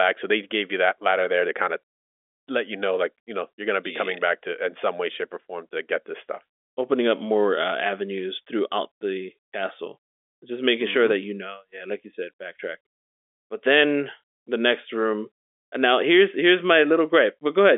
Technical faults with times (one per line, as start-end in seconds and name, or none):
none